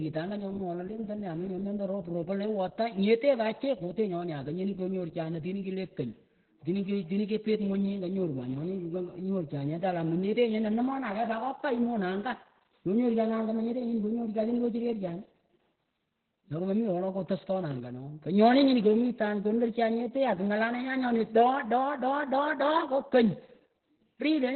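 From start to finish the speech carries heavy Opus voice compression. The sound points to the SILK coder at around 8 kbps in narrowband mode: nothing survives above 4.2 kHz, so a spectrogram shows a hard ceiling there, and coarse excitation leaves the voice muffled, hoarse and faintly robotic.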